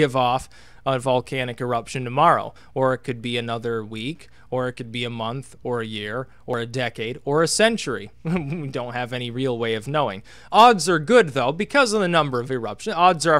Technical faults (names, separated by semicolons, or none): audio missing between chunks